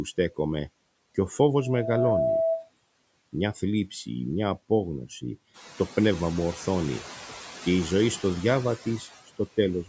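Noise suppressor artifacts run through the whole speech recording. The suppressor treats steady background sound as noise and pulls it down frame by frame, by about 20 dB. In the pauses, the room tone drops away. Under the talking it comes back up, so the background pumps in step with the voice. The room noise rises by about 10 dB at around five and a half seconds. The band ends at 8 kHz, as expected from call microphone processing.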